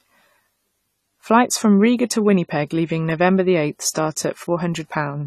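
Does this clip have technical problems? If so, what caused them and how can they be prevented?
Yes. Plainly audible AAC compression damage runs through the whole speech clip: nothing sounds above 14 kHz, and sibilants carry a smeared, fizzy texture. That is likely low-bitrate AAC-LC quantising coarsely, which fits roughly 32 kbps. Prevent it by encoding at a higher bitrate or keeping a lossless master.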